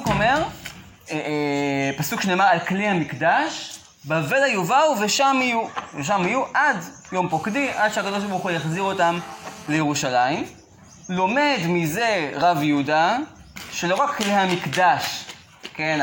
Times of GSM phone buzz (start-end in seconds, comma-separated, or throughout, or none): 7.31-9.76